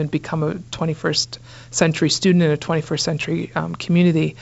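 No technical faults can be heard in the speech, which carries the band-limited sound of G.722 wideband telephone coding, with nothing above 7.7 kHz, a light hiss in the upper band and a slightly noisier lower band that fits a 56 kbit/s mode.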